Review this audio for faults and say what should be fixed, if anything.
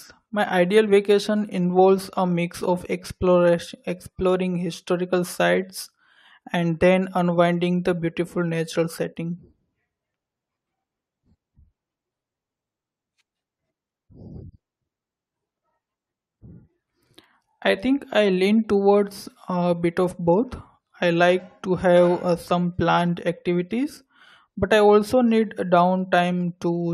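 Nothing here needs fixing, since there are no faults to hear anywhere in this recording.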